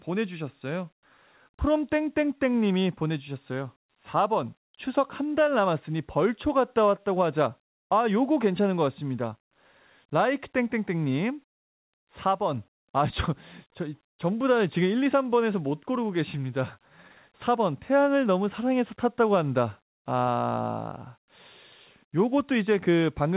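No technical faults can be heard in this speech, which comes through a call path with nothing above 4 kHz.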